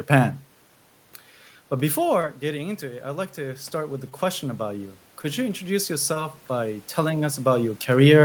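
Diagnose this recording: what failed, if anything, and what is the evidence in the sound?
Call processing: automatic gain rising. From 1.69 s to 7.54 s the level climbs by about 9 dB, answering an input drop of about 11 dB as the talker moves away near 2 s. The room noise swells with the voice, so the spectrogram's noise floor brightens steadily across that span.

Network, concealed in the decoder: short concealed packet loss at 2.21–2.25 s, 4.09–4.13 s, 5.21–5.26 s and 6.14–6.18 s. Each is roughly 20 ms of lost audio that the receiver patched by extending the preceding sound, so it is heard as a brief smear or wobble. On a spectrogram, harmonics run flat and blurred for a few hundredths of a second before rejoining. The waveform shows a short, overly regular stretch.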